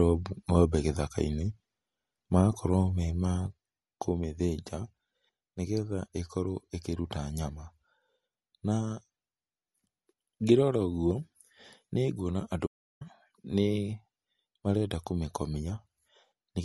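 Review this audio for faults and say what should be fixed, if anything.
MP3 compression, throughout: the speech has the watery, swirling quality of an encoder short of bits, with weak frequency components flickering on and off between frames and smeared attacks on consonants. Nothing is present above about 11.9 kHz, the fixed treble cut these encoders apply. The damage is plainly audible and fits a bitrate near 48 kbps, so a likely cause is lossy MP3 encoding at too low a rate. Keep masters in a lossless format, or encode at a far higher bitrate.

One channel drops out, from 3.47 s to the end: just after "me ma" the level falls abruptly by about 6 dB and stays down, while the tone is unchanged. That step is what a mono sum shows when two channels carried the same signal and one of them is lost, so the likely cause is the loss of one of the two channels. Check both input channels and their cabling before recording.

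Audio dropout to silence, 12.67 s to 13.01 s: the speech cuts out for about 343 ms and returns mid-flow, and the gap is dead silent with no room tone, so whatever was said there is gone. This points to the input signal being lost while recording carried on writing silence, likely from a momentary disconnection, a link failure or an accidental mute. Secure connections and monitor input levels while recording.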